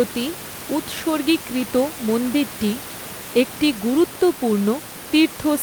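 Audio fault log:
Nothing stood out on listening to this speech recording, with only the room background sitting about 13 dB beneath the talker.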